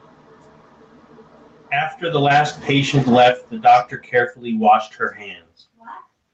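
From 1.99 s to 3.05 s the speech and the background noise behind it swell together, climbing by about 4 dB over roughly a second rather than jumping at once. This is automatic gain rising: the call's gain control judged the incoming level too low and raised its gain step by step, lifting everything in the signal alike, noise included. Throughout the clip the audio stops at about 8 kHz, which fits the bandwidth of the call path it travelled through.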